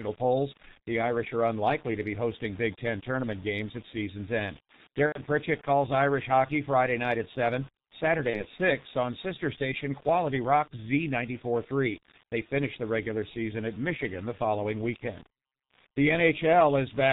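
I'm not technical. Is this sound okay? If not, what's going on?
No. The whole clip went through the G.723.1 codec, an old internet-phone format that squeezes speech into very little data. It throws away everything above 4 kHz and updates its model of the voice only in coarse 30 ms steps. So the speech sounds muffled and hoarse throughout, with consonants smeared and hard to tell apart, and the damage here is heavy.

There is also VoIP packet loss concealed by the speech codec, twice: from 5.06 to 5.22 s, and from 8.30 to 8.46 s. Pieces of the audio never arrived, and the decoder filled each gap by guessing from the last sound it had. That guess comes out as a short buzzy, stretched tone or a coloured noise that fades, and the speech stays weak and warped for a moment afterwards. The first dropout is longer.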